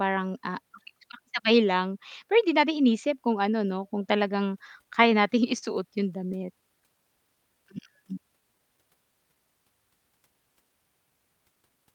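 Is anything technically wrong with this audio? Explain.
Yes, the speech has three timing faults from the receiver's jitter buffer.

Between 4.67 and 5.64 s there are repeated stalls (stutter): six brief hitches where packets arrived late and the buffer ran dry, so the receiver stretched the last sound to bridge each wait. Together they fill 84 ms, the longest is 40 ms, and they make up about 9% of that stretch. Nothing is lost, so the audio drags and hiccups rather than skipping. That distinguishes it from packet loss, where pieces would be missing.

From 6.40 to 9.65 s there is a jitter buffer slow-down. The receiver was building up a reserve by repeating single pitch periods and small bits of pauses, adding 189 ms in total. The speech plays at about 94% of normal speed, so sounds are drawn out and there may be a slight warble. Unlike the stalls, the slowing is spread smoothly across the whole stretch, with no separate catches. 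The pitch also stays the same, unlike a slowed-down tape.

From 11.55 to 11.93 s, near the end, there is a jitter buffer speed-up. The buffer held more audio than its target, so the receiver trimmed pieces of one or a few pitch periods each, roughly 70 ms in total. The speech runs at about 114% speed and sounds hurried, but the pitch is unchanged. This separates it from a sample-rate error, and there are no audible holes as there would be with dropouts.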